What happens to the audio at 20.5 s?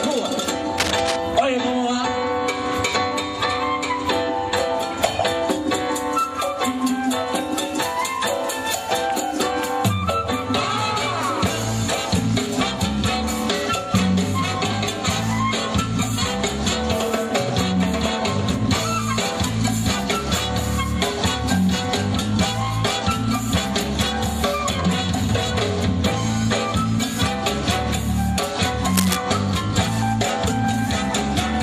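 Nothing goes wrong at 20.5 s; the audio runs through that moment intact, with no dropout, click, glitch or other fault to be heard.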